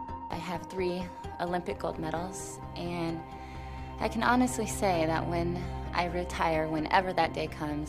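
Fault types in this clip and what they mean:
No fault types can be heard in this clip, so there is nothing to explain.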